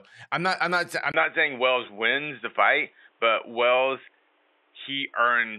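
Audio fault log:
1.12–5.58 s, input switched to a poorer device: right after "not I'm not I'm", a 20 ms gap, then nothing above 3.8 kHz, a level shift of about 5 dB and a new noise floor, likely a different microphone. Unlike a filter, tone, level and noise all change together.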